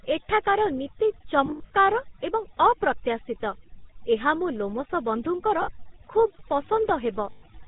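Speech, and it's been through the wringer. Overdone noise removal runs the whole way: the reduction was pushed so hard that bands near its noise estimate get switched off along with the quieter bits of the voice, leaving near-silent gaps with little twinkly specks. On top of that sits the GSM full-rate codec, with plainly audible damage. That buzzy, gravelly roughness and the hard cutoff at 4 kHz point to the old 13 kbps GSM coder, which rebuilds the voice from a vocal-tract model driven by sparse pulses. Then there are lost GSM frames at three spots, where the last good frame gets repeated, giving a short metallic ringing hold. The first runs from 1.46 to 1.71 s, with about 180 ms lost in patches across 240 ms and the longest run around a tenth of a second. The second is 5.62 to 5.71 s (60 ms), and the third is 7.32 to 7.44 s (100 ms).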